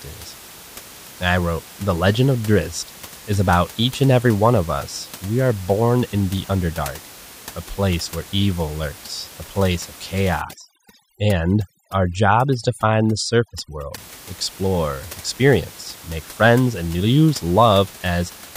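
Overdone noise removal, 10.42 to 13.98 s: bands near the noise estimate are switched off, leaving twinkling near-silence and taking quiet parts of the speech with them.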